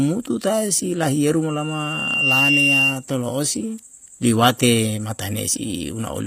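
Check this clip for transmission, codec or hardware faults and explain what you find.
Two problems stand out in this speech clip: codec damage throughout and a feedback squeal near the start.

HE-AAC compression, likely at a low bitrate (it fits about 24 kbps), runs the whole way through. The damage is plainly audible and nothing reaches above 15.5 kHz. The treble is rebuilt from copied lower bands, so the sibilance doesn't quite match.

A loudspeaker feedback squeal runs from 1.48 to 3.04 s. A mic picked up its own speaker, and the loop ran away at 2.8 kHz. Over roughly under a second the tone builds to around 5 dB above the speech.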